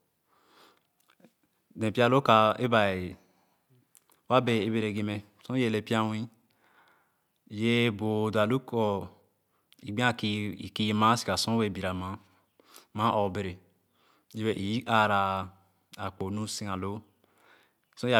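No technical faults are audible.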